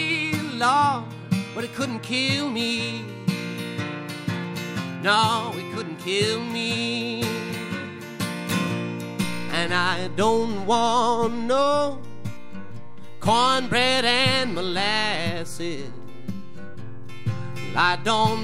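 A DC step occurs at 9.24 s, where the waveform's zero line jumps by about -30 dBFS, as when a converter recalibrates or an offset input is switched in. The offset holds to the end, and the step is heard as a single low thump or click while the sound continues unchanged.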